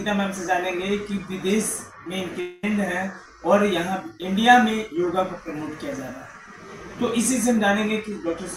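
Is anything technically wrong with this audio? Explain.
Yes. From 2.40 to 2.64 s the sound turns into a fading buzzy continuation of itself, then resumes with roughly a quarter second missing, likely a long network dropout concealed by the receiver.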